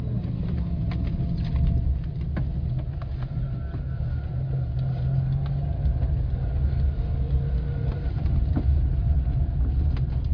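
No technical faults are audible anywhere in the recording.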